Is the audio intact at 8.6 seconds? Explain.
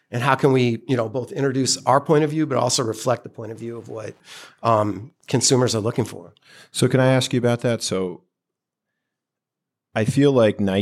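Yes, the audio is intact at 8.6 seconds, with no fault present at that moment.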